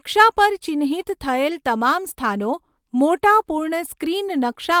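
No technical fault can be heard anywhere in the speech. Nothing in the recording calls for a time or a value to be marked.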